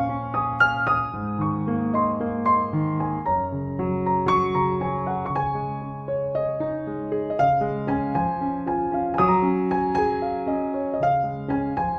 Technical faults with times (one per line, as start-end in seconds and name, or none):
none